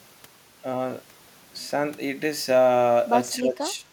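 From 1.93 s to the end, pre-emphasis left on boosts the treble about 11 dB at 10 kHz, matching a 50 µs FM curve left undone, making the speech thin and sibilant. From 3.36 to 3.86 s the speech dips by roughly 15 dB, likely speech suppressed in double talk by an echo canceller ducking both sides.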